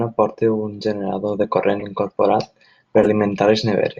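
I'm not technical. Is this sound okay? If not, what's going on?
No. Corrupt frame decoded: damaged chunks of compressed data were played anyway, giving a brief glitch at 1.79–1.83 s and a longer, louder glitch at 2.97–3.07 s.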